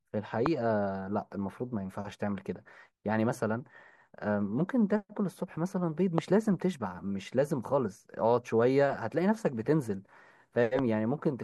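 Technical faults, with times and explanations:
0.46–0.48 s, 6.18–6.20 s and 10.79–10.81 s, loud pop: a sudden voltage pulse, likely from a switch, plug or static discharge, enters the signal chain and adds a single sharp pop over the speech, which continues underneath. It peaks at roughly 20 dB above the speech, and the last one is a little weaker.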